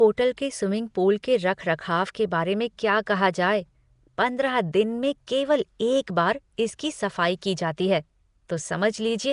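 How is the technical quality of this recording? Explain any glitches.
The recording has clearly audible codec damage throughout. Likely Nellymoser compression coded it in coarse blocks and filled weak bands with noise, leaving a rough hissy halo, smeared underwater tone and nothing above 10.6 kHz.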